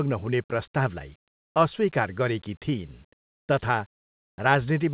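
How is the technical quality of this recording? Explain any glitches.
Two short stretches of comfort noise in place of the background are present, heard through a call path that carries nothing above 4 kHz. From 1.28 to 1.54 s, just before "अस्वीकार गरेकी", and from 4.0 to 4.38 s, the real background gives way to a smooth, detail-free hiss. It is about 18 dB quieter in the first stretch and only about 2 dB down in the second. The likely cause is the sender pausing transmission in silence and the receiver filling the gap with shaped synthetic noise. Unlike a dropout, these gaps never fall fully silent.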